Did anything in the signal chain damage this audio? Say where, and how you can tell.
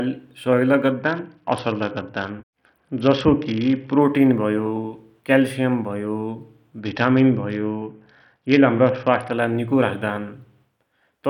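Yes. A Bluetooth SBC bit pool drop in the codec at 0.92–4.01 s and 6.80–9.32 s: dull treble and grit fit a bit pool cut from 31 to 7, starving the upper sub-bands.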